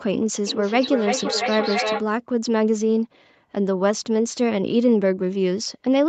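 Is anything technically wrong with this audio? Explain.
Yes. From 0.47 to 2.09 s there is feedback echo between two devices: one device plays the other's microphone signal and that microphone picks it up again. The speech returns roughly every 300 ms, thinner and ringing, peaking about 4 dB below the speech, seen as evenly spaced copies in the waveform and spectrogram.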